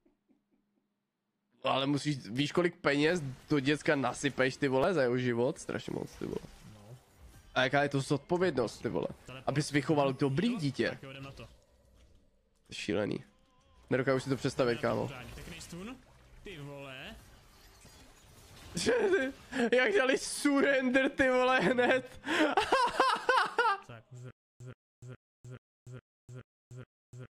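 A likely playback stall from 24.31 s to the end causes stutter with silent gaps: a 126 ms burst repeats every 421 ms, separated by silence.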